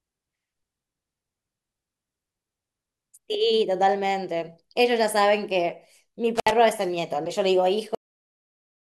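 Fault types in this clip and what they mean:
intermittent contact: A loose plug or cable briefly loses connection, so the signal drops out. Here it happens between 6.35 and 6.51 s. The speech cuts out for about 67 ms, with crackle on either side and faint hiss left while the line is open.
cut-off end: The final stretch of audio never got written out, so the recording just stops mid-sound. At 7.95 s the speech drops straight to digital silence with no natural decay, and it stays dead silent from there to the end.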